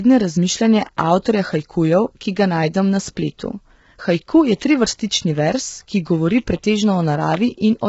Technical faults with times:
0.00-7.88 low-delay AAC compression

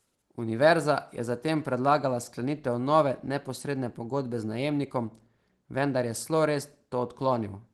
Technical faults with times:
none

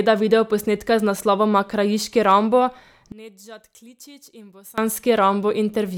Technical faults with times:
3.12-4.78 one channel inverted

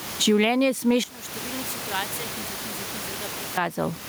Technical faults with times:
0.00-4.09 gain pumping
1.04-3.58 one channel inverted
2.56-3.13 CD stuck on one turn

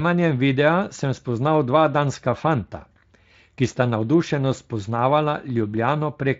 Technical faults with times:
none

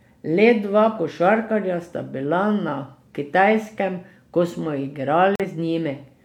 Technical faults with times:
5.35-5.45 digital broadcast dropout

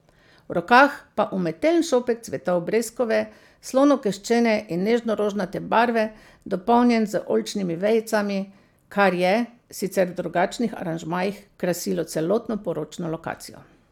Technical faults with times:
none

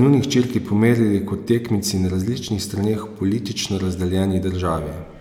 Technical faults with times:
none

